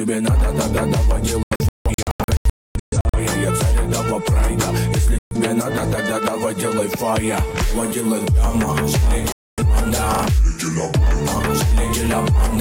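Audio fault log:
1.43–3.19 s, 5.18–5.36 s, 9.32–9.62 s, digital broadcast dropout: the sound drops to silence and then resumes further on, with the missing material gone. In the first stretch about 1.07 s vanishes in several short holes across 1.71 s, the longest 0.26 s. The later two lose about 0.13 s and 0.26 s. The receiver lost the signal or got frames that failed their checksum, and muted until good frames arrived.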